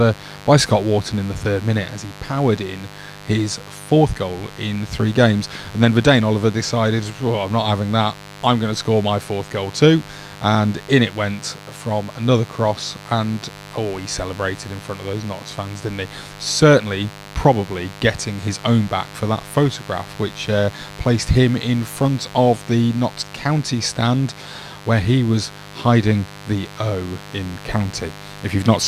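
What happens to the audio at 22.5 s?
At 22.5 s the speech sits on a mains buzz that runs through the whole clip rather than starting there. Interference from the power supply, probably from a dimmer, rectifier or poorly shielded cable, injects sharp spikes twice per 50 Hz cycle. That adds a ladder of 50 Hz harmonics reaching up into the kilohertz range. The result is a steady, raspy buzz roughly 20 dB below the speech.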